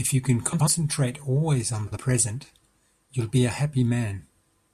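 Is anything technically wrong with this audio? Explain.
Yes. The speech has frames out of order in two places. From 0.52 to 0.68 s, two neighbouring runs of 72 ms each were decoded in swapped order, which fits runs of three frames. From 1.87 to 1.98 s, two 48 ms runs were swapped, which fits two-frame runs. Each stretch plays with its halves exchanged. It sounds like a brief garbled flutter. No time is lost.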